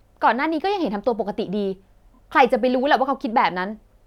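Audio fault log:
2.13–2.18 s: repeated frames. A 26.1 ms slice plays three times in a row, which fits one compressed frame resent. It stutters, and adds 52.2 ms.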